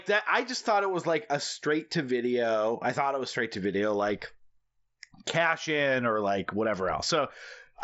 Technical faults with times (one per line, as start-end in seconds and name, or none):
none